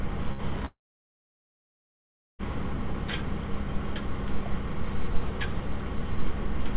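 At 0.32 s there is a burst of packet loss lasting until 0.42 s. A short run of audio never arrived. The receiver stretched the last sound for about 66 ms, fading it out. Playback then jumps ahead, skipping about 60 ms.

From 0.66 s to 2.42 s comes a long network dropout. The sound smears into a fading tail, then turns to near silence for about 1.6 s. This is likely a network stall. About 1.7 s of audio is lost before playback resumes, band-limited below 4 kHz by the call codec.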